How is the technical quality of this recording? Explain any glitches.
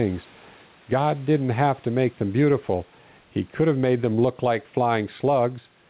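Gain pumping runs through the whole recording. The gain swings by around 5 dB. The likely cause is a microphone gain set far too high, with a fast limiter or compressor clamping down on each loud syllable and releasing in the gaps. Loud and quiet passages end up squeezed toward one level, which gives the sound a squashed, pumping quality.

The room noise sits about 37 dB below the speech. Nothing is heard above 4 kHz, which fits the narrowband telephone-style coding of a call path such as G.711.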